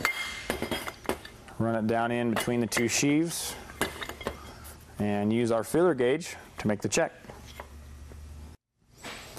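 Right through the sound there's a dull, gurgling graininess with upper bands flickering out, which is likely MP2 compression starved of bits, fitting something near 80 kbps.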